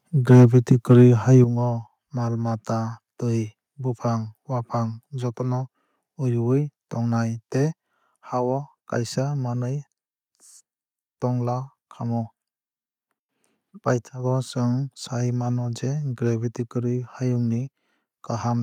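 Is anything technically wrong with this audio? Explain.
Yes, there are two related problems right at the start of this speech clip.

From 0.3 to 0.45 s, and again from 0.71 to 1.04 s, there's microphone overload. The loudest syllables crackle and sound harsh. That's most likely because the input gain was set too high, so the peaks ran past the converter's ceiling and got flattened. The first burst is worse, pushing about 4 dB over with a good chunk of the waveform chopped off. The second is milder, about 2 dB over with only a small fraction clipped.

Then at 1.44 s the microphone volume gets stepped down. The speech and the background both drop by about 7 dB at once, like someone yanked a fader. Coming right after those distorted peaks, it's likely the call software spotted the clipping and cut the device's input level in one go rather than easing it down.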